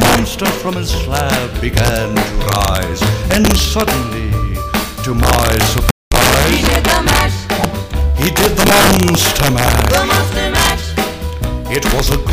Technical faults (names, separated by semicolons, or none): integer overflow; playback stall